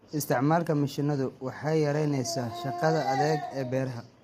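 Throughout, the speech sounds rough and grainy, with nothing above 15.7 kHz, likely from low-delay AAC compression whose short frames resolve harmonics poorly, fitting roughly 32 kbps.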